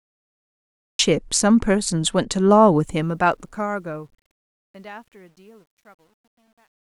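This speech clip opens with digital silence until 0.99 s, then the sound jumps in mid-utterance with no natural attack, a cut-off start caused by recording or streaming beginning late. From 2.79 s the fade-out, which runs to 6.96 s, grows gritty, worst from 4.53 s to 6.96 s. This is truncation distortion on a fade: the fade stage dropped low-order bits without dither, consistent with roughly 11-bit resolution, so quiet passages collapse into coarse steps.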